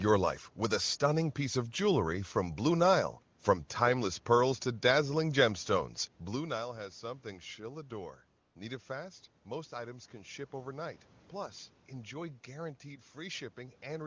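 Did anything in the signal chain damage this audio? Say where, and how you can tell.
Yes. At the codec stage, discontinuous transmission cut in: from 8.41 to 8.55 s the phone judged the sound silent, sent no speech frames for 140 ms, and the receiver filled the gap with AMR comfort noise, a smooth, steady hiss that switches in and out in place of the real room background.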